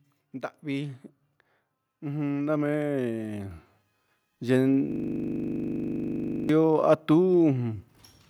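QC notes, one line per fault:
2.49 s, microphone volume stepped up: the speech and the room noise behind it jump together by about 4 dB in a single instant and stay at the new level. That points to the call software raising the input device's volume in one move. It is not a compressor or gain-rider. Those ride the level smoothly over tens of milliseconds and track the voice, while this is an abrupt step that lifts the background floor just as much as the speech.
4.92 to 6.49 s, system hang loop: the same 40 ms slice of audio repeats exactly, about 39 times in a row, at 25 Hz. At that length the repetition fuses into a steady, buzzy drone with a pitched quality rather than distinct stutters. It sounds like the machine or driver stalled while the sound hardware kept replaying its ring buffer. Packet-loss concealment sounds different, because its repeats fade, vary and last only briefly. Here every cycle is identical, the level holds, and it goes on for over a second and a half.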